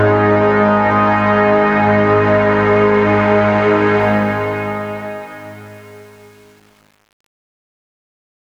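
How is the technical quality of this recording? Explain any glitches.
The recording has one glitch, in the fade-out of the music. Truncation distortion on the fade runs from 4.00 to 8.50 s, worst from 4.73 s. The fade stage drops bits without dither, consistent with 8-bit resolution, so the dying tail turns gritty.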